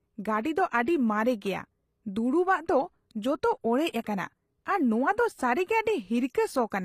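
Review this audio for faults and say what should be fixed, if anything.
Throughout the speech, the treble sounds synthetic: s sounds come out gritty and lispy, and the upper band has a metallic sheen that does not match the body of the voice. The likely cause is HE-AAC compression, where only the lower spectrum is coded and the highs are rebuilt by spectral band replication, so upper harmonics fail to line up with the real ones. The damage is plainly audible and fits a low bitrate of around 24 kbps. On a spectrogram the upper region would look like repeated, blocky copies of lower bands with coarse envelope steps, and nothing above 15.5 kHz. To prevent this, deliver the speech at a higher bitrate with plain AAC or a lossless format instead of HE-AAC.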